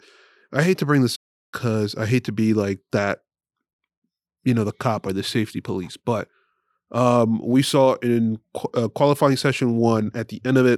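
A playback stall interrupts this speech clip from 1.15 s to 1.54 s, where the sound cuts out mid-flow and the output falls silent for about 370 ms before carrying on. A gap like this, arriving abruptly rather than as a natural pause, is likely the player starving for data or having its audio thread blocked, so nothing reached the output until it recovered and resumed feeding samples.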